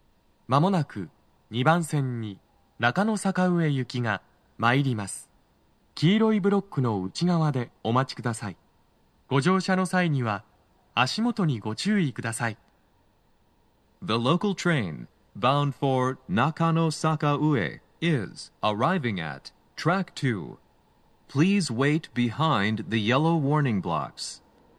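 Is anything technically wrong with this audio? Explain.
No, the signal shows no technical faults anywhere in the recording.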